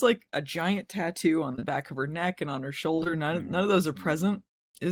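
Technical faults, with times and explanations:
1.51–1.64 s, short concealed packet loss: three back-to-back gaps of 20 ms each, which fits three lost 20 ms packets. The receiver bridged each gap by extending the preceding sound, using its pitch if voiced and shaped noise if not. It then faded back into real audio. The result is a brief smeared wobble of about an eighth of a second.
2.95–3.07 s, short concealed packet loss: the same pattern repeats, with three consecutive 20 ms gaps patched the same way, producing a second short smear.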